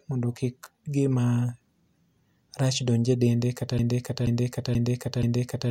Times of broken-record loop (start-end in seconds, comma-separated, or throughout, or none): 3.79-5.70